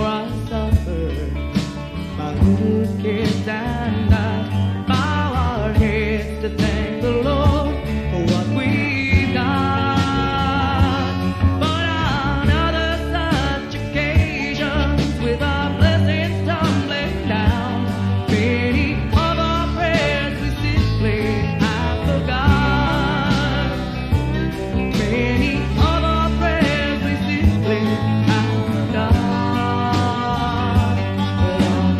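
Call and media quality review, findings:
Nothing stood out on listening that would warrant a ticket entry.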